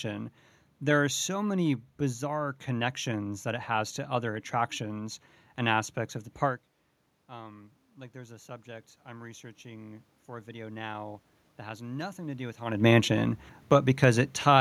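A speech clip with automatic gain rising: the talker drops away from the microphone around 6.5 s, the input falling by about 18 dB, and after "aspects of the park", from 7.28 to 12.63 s, the gain control slowly compensates, adding about 10 dB. Voice and room noise swell together, so on a waveform the envelope and the noise floor climb in step, and a spectrogram shows the background band brightening gradually rather than jumping. The talker moves again near 12.5 s.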